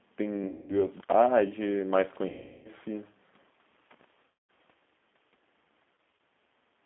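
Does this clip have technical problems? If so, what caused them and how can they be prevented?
Yes. The speech runs through the G.729 codec for the whole clip. It rebuilds each 10 ms frame from a vocal-tract filter, a pitch predictor and a few pulses at 8 kbit/s, so the sound is confined to about 200 Hz to 3.5 kHz and has a plainly audible rough, synthetic edge. Unlike a simple low-pass or a bad microphone, the damage follows the voice itself. A wideband codec such as Opus at a higher bitrate would prevent it.

VoIP packet loss concealed by the speech codec occurs at 0.48 to 0.87 s (about 210 ms lost), 2.29 to 2.69 s (about 360 ms), 4.25 to 4.48 s (about 240 ms), and around 6.10 s, where about 90 ms is scattered over 240 ms in runs no longer than 30 ms. In each case the decoder stretches its last pitch and filter into a fading buzzy tone or coloured noise, and the voice stays weak briefly afterwards. 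That smooth, tonal smear and slow recovery separate it from a hard contact dropout. A steadier network path, prioritised voice traffic and forward error correction would prevent it.

An intermittent contact opens the line at 0.97 to 1.13 s, for about 93 ms, and at 3.91 to 4.04 s, for about 68 ms. A loose plug or cable breaks the circuit, so the sound cuts out abruptly with crackle at both edges, leaving only faint hiss in the gap. The clicks and the sudden silence, with no synthetic tone filling the gap, mark it as physical rather than network loss. Reseating or replacing the cable and connector would prevent it.

Background gated by the echo canceller appears at 6.34 to 6.45 s, where the room sound dips by about 10 dB for roughly 100 ms and then returns. While far-end audio played on the loudspeaker, the canceller turned the microphone down to suppress echo. It is a level dip with clean edges and no crackle, which distinguishes it from the contact fault. 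Using a headset or a better-tuned, less aggressive echo suppressor would prevent it. The call microphone processing's removal of the lowest bass is expected and is not a problem.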